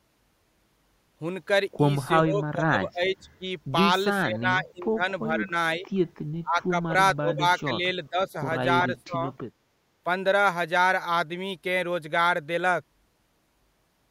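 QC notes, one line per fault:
2.27–3.45, 4.23–5.03, 5.33–5.54, 5.76–5.86, 6.43–6.94, 7.15–7.43, 7.65–8.35, 8.94–9.24 s: speech suppressed in double talk. The level dips by up to about 25 dB, likely because an echo canceller turned down the near side during overlap. These show as notches in the waveform envelope and faded spectrogram bands.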